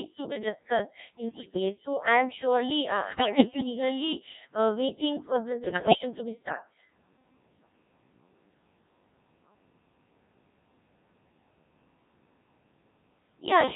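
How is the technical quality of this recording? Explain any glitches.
Poor. The whole recording has passed through a very low-rate digital voice codec, and three short stretches are further wrecked by transmission errors.

Codec 2 vocoder: Throughout, the speech was carried by a vocoder that transmits only pitch, voicing, loudness and a rough spectral shape. The decoder rebuilds the voice from sine waves rather than the original waveform. The heavy, buzzy, robotic character fits one of the lowest-rate modes, around 1.3 kbit/s, and the voice sounds synthetic and smeared from start to finish.

Bit errors on digital voice radio: At 1.29 to 1.60 s, after "to be discussed", at 3.04 to 3.67 s, after "am surely uh", and at 5.64 to 5.98 s, between "uh waiting for this" and "to be", corrupted bits reached the decoder. The error rate was high, roughly one bit in seven. Each bit controls pitch, level, voicing or spectrum for an entire frame, so the speech lurches in pitch and loudness and dissolves into warbling, bleeping gibberish.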